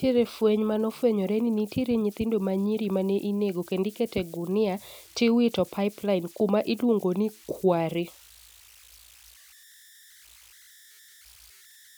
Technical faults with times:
0.00-11.97 converter idle tones

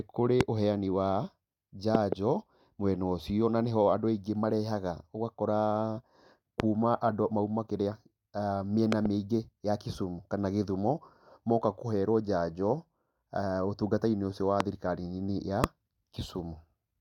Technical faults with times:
0.41-0.43 loud pop
1.95-2.15 loud pop
6.60-6.62 loud pop
8.92-9.08 loud pop
14.60-14.63 loud pop
15.64-15.66 loud pop

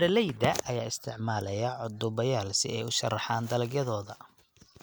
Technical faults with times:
none

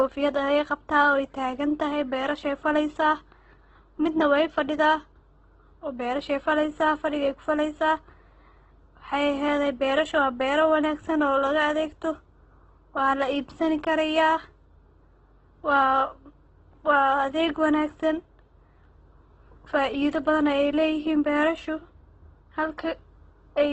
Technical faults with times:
0.00-23.73 Opus compression

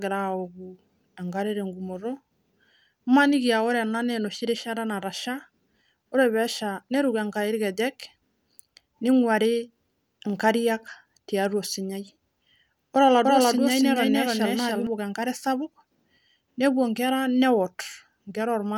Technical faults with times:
13.25-14.87 doubled audio track

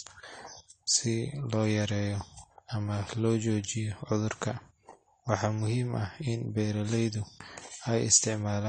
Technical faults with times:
0.00-8.69 AAC compression

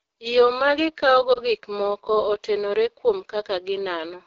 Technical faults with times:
0.00-4.26 AMR wideband (HD Voice) codec
1.33-1.40 lost AMR speech frames

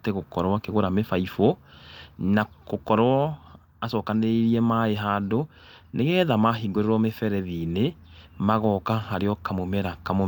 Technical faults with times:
none

